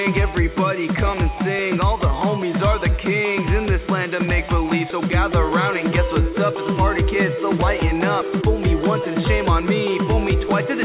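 No faults can be heard: the audio comes through a call path whose G.711 A-law coding, which fits a 64 kbps narrowband link, leaves nothing above 4 kHz, with no dropouts, glitches or other disturbances at any point.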